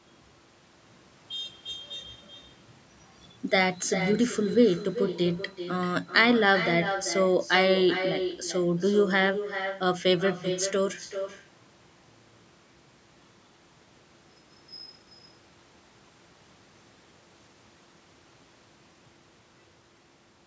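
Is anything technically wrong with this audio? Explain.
Yes. Throughout the clip there is echo with no canceller: the far end plays the call on a loudspeaker, its microphone recaptures it, and nothing removes the return. Every phrase comes back around 400 ms later, about 9 dB quieter, as a thin shadow. The call microphone processing behind it caps the audio at 8 kHz.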